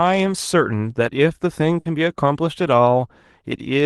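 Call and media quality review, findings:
Burst of packet loss, 1.79 to 1.87 s. Speech briefly smeared into a held, fading continuation of the last sound, then resumes slightly further on. Probable component: jitter buffer and packet loss concealment. Mechanism: consecutive packets lost or late, about 60 ms of sound extrapolated from the last frame and faded down, with about 60 ms of speech skipped on resume. Call path audible as Opus coding, top end cut near 12 kHz, fits a bitrate around 24 kbps.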